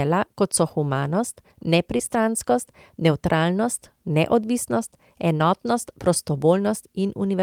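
Short concealed packet loss at 1.97–2.01 s and 5.37–5.41 s: 20 ms of audio went missing, and the decoder stretched the preceding sound over the gap, leaving a brief smear.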